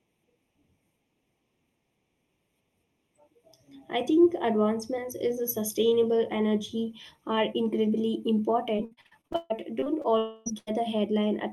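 Throughout the speech, channel delay (comb filtering) of a fraction of a millisecond puts fixed notches from around 1.5 kHz upward, giving a steady hollow tone rather than changing artefacts. From 8.75 to 10.06 s, repeated packet loss (robotic sound) chops the speech into fragments: about a dozen patched gaps, the longest 140 ms, unlike a single hole. From 10.18 to 10.48 s the sound becomes a continuous fading buzz or hiss lasting about 0.28 s with no silence, likely a long network dropout. From 10.58 to 10.69 s, a burst of packet loss replaces about 80 ms of speech with about 90 ms of fill before the speech resumes.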